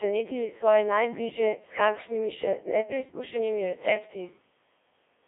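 Throughout, Codec 2 vocoder resynthesis at a rate near 1.3 kbit/s makes the speech robotic and buzzy. The spectrogram shows rigid harmonic combs between 300 Hz and 3.5 kHz.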